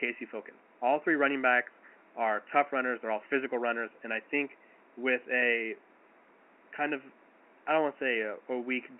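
No technical faults can be heard in this recording.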